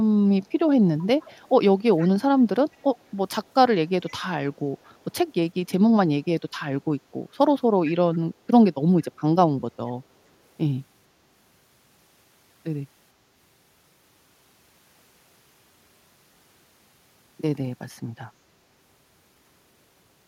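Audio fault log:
1.02–1.49 s, 1.98–2.07 s, 2.72–3.04 s and 4.06–4.13 s, echo leak: faint copies of the speech return 455 ms behind the original, roughly 25 to 35 dB down, in brief scraps. This is likely residual loudspeaker pickup that the far end's echo canceller failed to remove.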